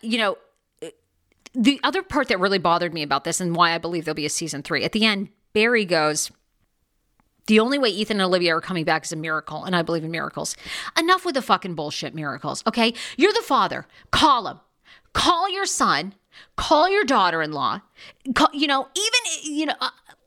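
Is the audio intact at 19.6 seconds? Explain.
Yes, the speech at 19.6 seconds plays through intact, with no dropout, click, distortion or other fault at that moment.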